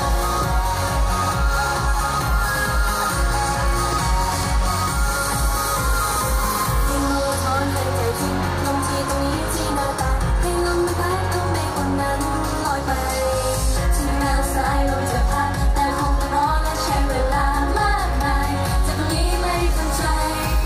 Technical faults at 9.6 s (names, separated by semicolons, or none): none